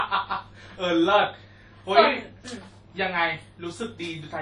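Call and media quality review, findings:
Ringing, washy speech with a hiss that breathes with the signal, throughout. Plainly audible codec damage, nothing above 10.1 kHz. Likely WMA compression at low bitrate, around 32 kbps. Long transform blocks smear quantisation noise. Weak spectral lines zeroed.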